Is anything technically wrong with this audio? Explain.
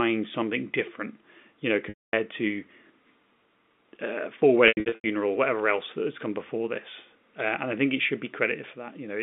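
Yes. Packet loss with pitch repetition occurs at 1.89–2.13 s, just after "something different you know", and at 4.68–5.04 s, just before "whatever else that has". The first gap is about 240 ms. The second is about 270 ms lost in bursts across 360 ms, the longest run 90 ms. The receiver loops the last pitch period, so each gap sounds like a buzzy held tone fading to silence. A spectrogram shows frozen, evenly spaced harmonics, and the waveform shows an identical repeating cycle shrinking in amplitude. The narrow telephone band from the G.711 line carries through both events.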